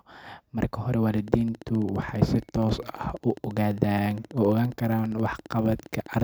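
Speech carries a train of clicks from 1.28 s to 6.21 s: some seventy evenly spaced pulses at 14.8 per second, each peaking roughly as loud as the speech and audible through pauses, likely from interference from nearby equipment or a faulty connection or power supply.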